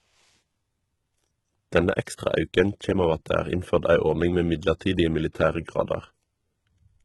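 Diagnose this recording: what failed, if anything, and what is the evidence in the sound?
The codec stage is at fault. Throughout, sibilants sound gritty and lispy and the treble has a synthetic, metallic brightness, pointing to heavy damage from likely HE-AAC compression at a low bitrate around 16 kbps. Its band replication copies lower bands upward. A spectrogram would show blocky, repeated high-band texture with harmonics misaligned above the crossover.

The same codec stage also produces pre-echo. Just after "innførd ei ordning med", at 4.79 s, a short hiss of about 17 ms leads an attack, and again from 5.32 to 5.35 s, spreading over 25 ms. Quantisation noise fills each transform block before its transient, visible as a low smear preceding the sharp waveform onset.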